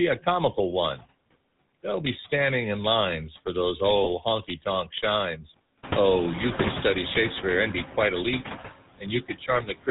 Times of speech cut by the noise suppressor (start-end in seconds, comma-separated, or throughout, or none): 8.99-9.88